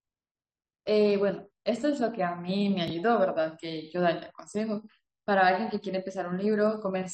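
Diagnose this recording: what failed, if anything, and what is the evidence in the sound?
What failed is the stitching between stream segments, an overlap between stream segments at the network and playback stage. There are tiny skips in the speech at 0.88 s and 2.88 s, each one where roughly 10 ms of audio goes missing. The segment timestamps overlap, so the player trims the supposed duplicate, but that audio wasn't actually doubled, so real sound is cut and the waveform jumps. The spacing fits 1-second segments.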